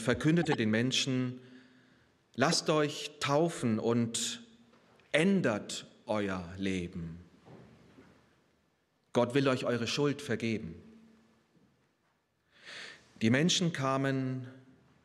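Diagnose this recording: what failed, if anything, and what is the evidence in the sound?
Chirpy noise bursts at 0.43–0.55 s and 2.49–2.54 s point to corrupt frames decoded at the codec, where flipped bits misplaced energy across several frames.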